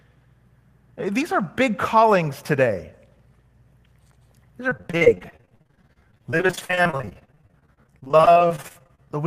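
From 4.69 s to 9.09 s the speech has repeated packet loss (robotic sound): 76 short holes follow one another, none longer than 46 ms. Each is patched by stretching the sound just before it, so about 1.6 s of the 4.4 s stretch, roughly a third, is filled-in rather than real. A single dropout leaves one isolated gap, but here the patches recur throughout, breaking the speech into brief repeated fragments.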